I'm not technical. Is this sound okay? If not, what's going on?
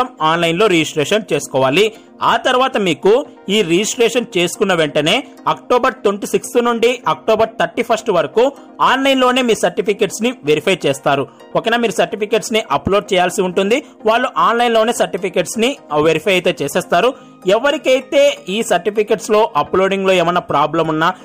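Yes, this sound is okay, and nothing in it is going wrong.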